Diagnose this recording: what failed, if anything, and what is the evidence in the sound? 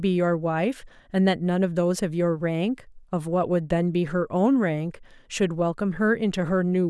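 Nothing stood out on listening to this speech recording; no stage of the chain gave any audible sign of having failed.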